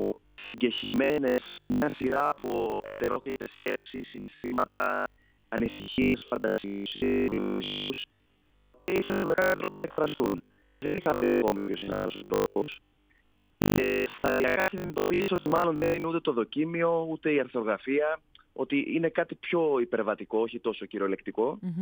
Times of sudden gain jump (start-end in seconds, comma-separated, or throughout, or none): none